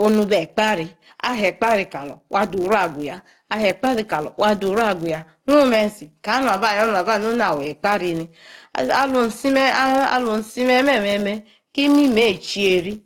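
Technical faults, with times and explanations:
throughout, filter restarted on every block: a buzz at 100 Hz runs under the speech and rises and falls with its level. The filter drops its memory every 10 ms, so each block opens with a small transient. A spectrogram shows evenly spaced vertical striations with energy stacked at multiples of 100 Hz.
throughout, gain pumping: the level swings by around 5 dB, dipping on loud syllables and climbing back between them, so loud and soft passages sit close together and sound squashed. The likely cause is gain set far too high, with a fast limiter or compressor reining it in. The waveform envelope looks flattened, with ripples following each loud onset.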